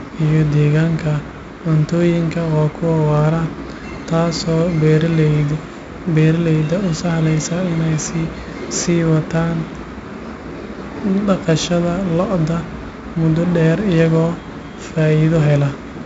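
4-bit ADPCM compression runs through the whole clip. Each sample is coded as a small 4-bit step from a predicted value, and the step size adapts as the speech moves, so the coding error rides along at the speech's level. The damage is heavy: a gritty hiss clings to every loud syllable, and sharp onsets smear where the step lags. Nothing is heard above 7.7 kHz, dulling the top end, which fits a 64 kbps stream at a low sample rate.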